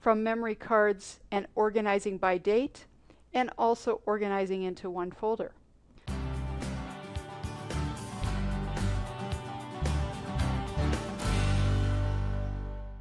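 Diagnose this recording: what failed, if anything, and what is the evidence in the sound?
Nothing has failed in this recording, and no stage in the chain shows a fault. No dropout, distortion, timing slip or other defect can be heard anywhere in the sound.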